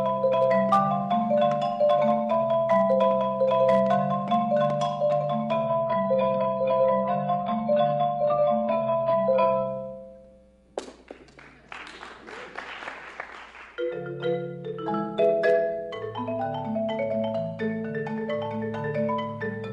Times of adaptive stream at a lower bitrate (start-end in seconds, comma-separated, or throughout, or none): 5.67-9.67